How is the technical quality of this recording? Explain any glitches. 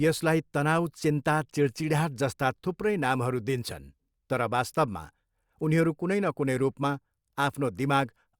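No audible glitches or technical faults anywhere in the speech recording.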